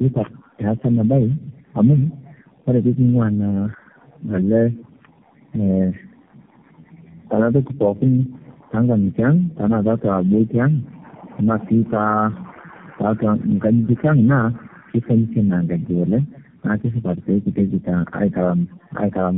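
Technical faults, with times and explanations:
Throughout, tandem speech coding: the call crossed several narrowband links, and at each border it was decoded and re-encoded by another speech coder. The sound fits a chain of roughly four such coders, AMR-NB and G.729A types, joined by A-law stages. Each coder models the previous coder's errors as if they were speech, so damage compounds, leaving speech rough, muffled and warbly, with nothing above 3.6 kHz.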